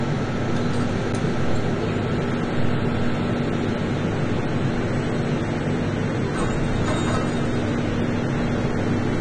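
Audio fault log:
Throughout: AAC compression, likely cause. Dull, smeared, swirly texture with nothing above 10 kHz, which fits a low bitrate near 32 kbps; the spectrogram shows a flat ceiling.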